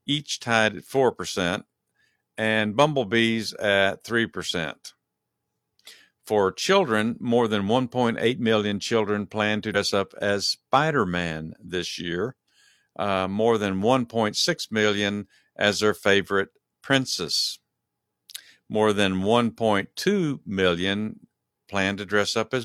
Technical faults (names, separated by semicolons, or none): damaged data in a compressed stream